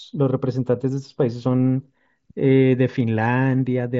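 No faults to report: the speech arrives over a Bluetooth mSBC headset link, which accounts for the band ending near 7.7 kHz and the light graininess the codec adds.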